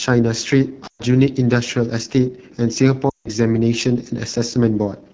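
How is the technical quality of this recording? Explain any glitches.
The quality is fairly rough. It's a wideband mobile call that's clearly struggling, with two short dropouts on top.

The AMR wideband (HD Voice) codec damage runs the whole way through. The voice has that raspy, grainy edge you get when AMR-WB runs near the bottom of its range, which fits the 8.85 kbit/s mode. At that rate the model of the vocal tract and its pulse excitation is coded so coarsely that detail smears into roughness. The top band, roughly 6.4 to 7 kHz, is just shaped noise rather than real speech content.

There are lost AMR speech frames at 0.87 to 1.02 s and again at 3.10 to 3.28 s. The gaps cover 120 ms and 160 ms, which points to runs of about six and eight frames that failed their checks. The decoder papered over them by repeating the last good pitch and vocal tract settings while turning the level down. 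So each gap comes across as a quick drop to near silence, and the speech returns a bit weak and rough.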